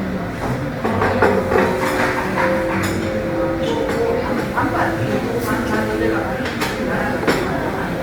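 Opus compression runs throughout the clip, with plainly audible damage. When an encoder in its music (CELT) mode has too few bits, it keeps the overall energy in each frequency band but fills the detail by copying lower bands upward or substituting noise. That is likely the cause here, and the texture fits a rate of around 24 kbps. Tonal parts of these sounds come out rough, grainy and noisy rather than swirling. The bandwidth stays full, reaching about 20.2 kHz.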